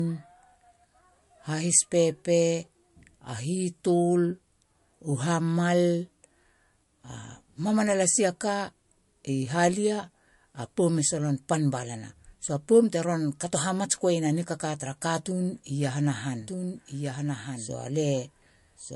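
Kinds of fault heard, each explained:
Low-bitrate audio saved at a high bitrate: Nothing above 11.3 kHz and lingering MP3 smearing point to a likely low-bitrate MP3 re-encoded at a much higher bitrate.
Doubled audio track: From 16.4 s to the end, a dry full-band copy about 5 dB quieter trails roughly a second behind, likely a second capture path.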